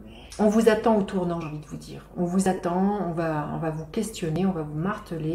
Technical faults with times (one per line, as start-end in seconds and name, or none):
0.32 dropped buffer (overrun)
1.42 dropped buffer (overrun)
2.46 dropped buffer (overrun)
2.57-2.59 lost LE Audio frames
4.36 dropped buffer (overrun)